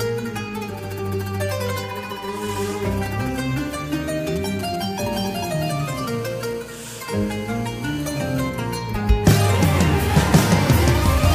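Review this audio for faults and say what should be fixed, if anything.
From 4.27 to 5.08 s there are GSM signalling bursts: a galloping dit-dit-dit of short 217 Hz buzzes, at around 15 dB under the audio. A nearby 2G phone is sending brief radio bursts while it sets up a connection, and the audio circuit rectifies them. Keep phones well away from the mic, cables and preamp, or switch them to flight mode.

Then from 5.13 to 8.50 s it turns into a steady GSM phone buzz, a hard, raspy 217 Hz tone with lots of harmonics sitting about 24 dB below the audio. The phone is now in a call and transmitting continuously at that rate, and the circuitry demodulates those pulses too. Shielded, balanced cabling and RF filtering on the inputs would help, but distance from the handset is the real cure.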